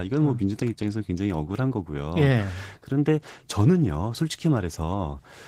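From start to finish the speech sounds hoarse and faintly robotic: Opus voice compression in hybrid mode, coarsely coded in a way that fits about 16 kbps.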